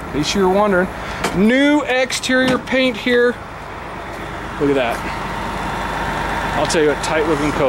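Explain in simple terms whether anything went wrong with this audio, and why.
Listening closely, nothing in this recording stood out as having gone wrong.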